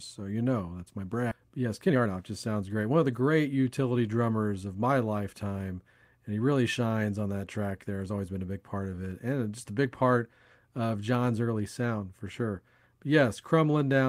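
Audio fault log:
1.31–1.33 s skip ahead: The speech jumps forward with no silence and nothing filled in, so roughly 0.7 s of speech is simply gone and the two sides are butted almost directly together. Later audio was already waiting, so playback resumed from there, cutting the delay by about as much as was lost. A dropout or concealment gap would leave a hole or a smeared filler; here there is only an abrupt splice where the flow of syllables breaks off.
1.40–3.14 s jitter buffer speed-up: Straight after the jump, the speech runs at 119 % of normal speed while the pitch stays where it was, so it sounds hurried but not higher. The receiver was holding more audio than it aims for and trimmed it by repeatedly cutting out short pieces one or a few pitch periods long, removing around a third of a second in total. A sample-rate mismatch would raise the pitch along with the speed, and a skip would remove one block at a time rather than shortening the speech evenly across the stretch.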